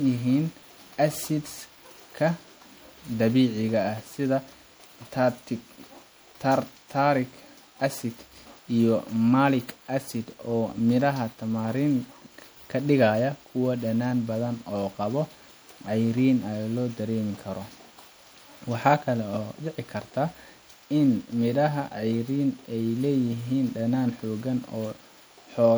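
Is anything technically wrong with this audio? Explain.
Yes. Throughout the speech, the sound has generation loss: it is swirly, hollow and smeared, with consonant attacks blurred and softened. The likely cause is repeated MP3 decoding and re-encoding, about four passes, at a quality that fits 96 kbit/s. Each pass quantises on a shifted frame grid, so errors compound. A spectrogram would show patchy, flickering holes and a ragged upper band, and the waveform's transients would look rounded and less sharp.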